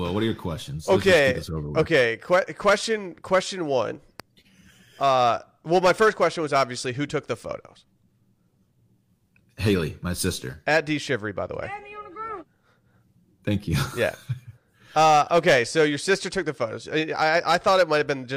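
Speech runs with hard clipping throughout. The peaks are pushed about 8 dB past what a stage can pass and are sliced flat. Only a small fraction of samples hit the ceiling, so there is crackle on loud syllables rather than constant fuzz, and it tracks the level of the speech, unlike random noise. A single loud pop lands from 4.20 to 4.22 s, standing a few decibels above the speech, which carries on unbroken underneath. It is a sharp one-off thump, not peak-driven crackle, and it likely comes from a voltage step such as a switch, plug or static discharge.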